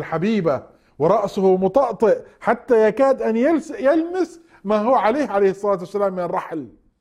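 No dropouts, glitches, distortion or other technical faults can be heard anywhere in the recording.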